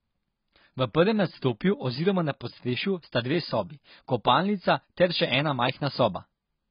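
Throughout, the speech sounds dull and smeared, with nothing above 5 kHz and a warbling, fizzy edge on sibilants, likely heavy AAC compression at a very low bitrate.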